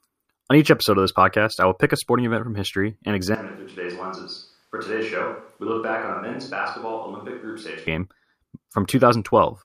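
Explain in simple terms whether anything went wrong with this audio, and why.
Yes, something went wrong. Right after "event from history and", at 3.35 seconds, the speech suddenly turns hollow and roomy, loses its warmth, drops noticeably in volume and picks up more background noise. At 7.87 seconds it snaps back. That is a switch to a distant microphone, most likely because the close microphone's signal dropped out. A speaker simply turning away would change gradually, while this change is instant in both directions.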